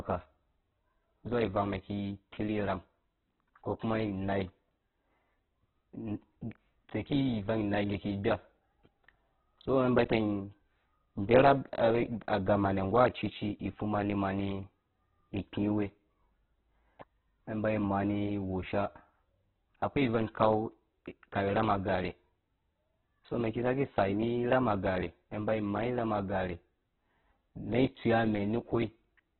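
Throughout this speech recording the sound is narrow, rough and grainy, with nothing above 4.4 kHz and a heavily damaged texture. This points to Opus compression, likely in its CELT mode at a very low bitrate around 8 kbps. At that rate the encoder fills starved bands with noise and cuts the bandwidth. At 17.0 s a sharp attack is preceded by a brief smear of hiss, about 17 ms long. That is pre-echo: the codec spread quantisation noise across its whole block, so noise meant for the loud onset leaked into the quiet moment just before it.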